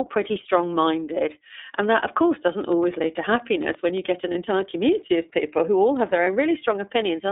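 From the start, the speech sounds thin, slightly rough and synthetic, with nothing above 3.7 kHz and little below 300 Hz. That is plainly audible iLBC codec damage: the narrowband coder rebuilds each frame's excitation independently, which fits its 13.33 kbps mode with 30 ms frames.

At 4.31 to 4.35 s and again at 6.23 to 6.27 s, a brief held, faintly buzzy vowel replaces the sound, and clarity returns almost immediately. These are lost iLBC frames, one 30 ms frame each time. The decoder repeats the last pitch cycle blended with noise, and because each frame stands alone it recovers at the very next one.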